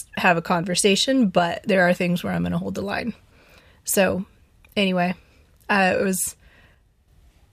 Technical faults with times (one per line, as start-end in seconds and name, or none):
1.39-1.57 one channel drops out
6.75-7.08 one channel drops out